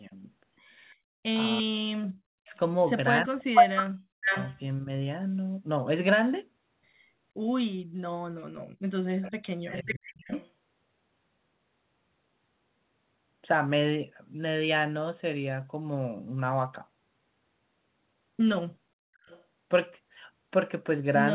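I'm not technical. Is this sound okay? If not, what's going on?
No. The sound has three kinds of problems, all from a call played over a loudspeaker.

Speech suppressed in double talk. The talker's voice dips or cuts out in pieces. This happens briefly at 0.09 to 0.14 s, then at 1.62 to 2.54 s, 3.23 to 4.9 s, and 8.41 to 10.31 s. In the longer stretches the voice nearly vanishes for up to about a second and a half. The likely cause is the echo canceller. It could not tell this voice apart from the other side's sound coming out of the loudspeaker, so it turned both down.

Background gated by the echo canceller. From 0.94 to 1.23 s, the room sound drops out almost completely. It is gone for about a third of a second, then comes back. Here the echo canceller was reacting to the loudspeaker playing. It pulled the microphone down hard for that moment, taking the background with it. When it let go, the room sound returned.

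Echo leak. A delayed copy of the voice comes back. From 2.54 to 4.6 s, it trails about half a second behind and is even louder than the voice itself. From 9.24 to 10.5 s, it lags slightly more than half a second and is quieter. At 19.23 to 19.44 s, there is a brief, faint scrap. The likely cause is a loudspeaker at one end whose canceller did not remove everything its microphone picked up.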